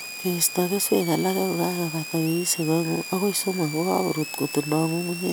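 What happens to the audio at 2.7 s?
At 2.7 s you're hearing the switching supply whistle that runs through the whole speech clip, a high tone wandering between about 2.2 and 2.8 kHz, roughly 10 dB under the signal. It comes from a power supply switching in an audible burst mode or beating with another supply.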